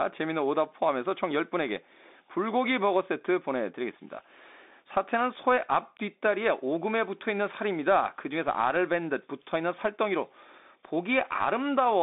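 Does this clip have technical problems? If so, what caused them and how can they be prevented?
Yes. The Bluetooth CVSD headset codec damages the sound throughout. The sound sits in a narrow band from about 250 Hz to 3.7 kHz, with nothing above 3.8 kHz, and a spectrogram shows a flat, hard ceiling there and an empty floor. The damage is plainly audible. The codec's one-bit up-or-down tracking fits a 64 kbps stream, so loud high sounds outrun the step size and distort, s sounds turn scratchy, and a granular hiss lies under the speech. To prevent it, record with a wired microphone or a Bluetooth link that uses a wideband codec instead of the headset profile.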